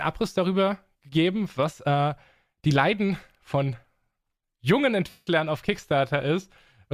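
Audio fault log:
5.10–5.27 s, lost LE Audio frames: about 0.17 s of the speech drops out. The LC3 decoder covers the gap by repeating its last spectrum with scrambled signs, so you hear a brief noisy smear that fades toward silence before the signal returns.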